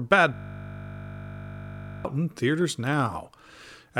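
From 0.34 to 2.05 s a system hang loop sets in: the computer or driver stalled while the audio hardware kept replaying the same 20 ms stretch of its ring buffer, about 85 times over. The repetition runs at 50 Hz, so the speech gives way to a steady, flat buzz at that pitch.

From 2.36 to 3.89 s come periodic USB or driver dropouts. Something blocks the bus or driver every 0.064 s, and a sliver of audio, well under a millisecond, is simply skipped each time. Around thirty evenly spaced ticks result, sitting on the speech like a regular clicking.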